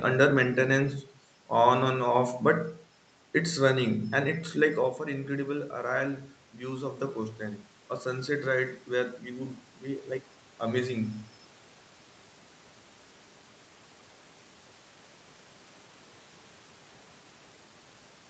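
Around 5.04 to 7.44 s, and again from 8.04 to 11.19 s, there's automatic gain rising: the voice dropped by about 9 dB at the mic, and the gain control slowly pushed it back up about 3 dB, so voice and room noise swell together.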